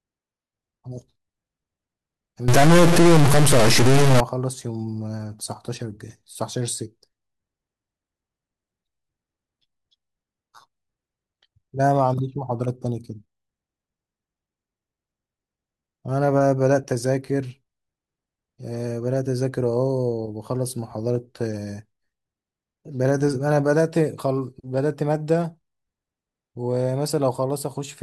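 Speech, with a stretch of harsh, buzzy distortion from 2.48 to 4.20 s, likely a stuck bit, with one high data bit pinned so about half the samples jump by a step near -10 dBFS. Unlike clipping, it roughens quiet moments too, filling pauses with loud noise.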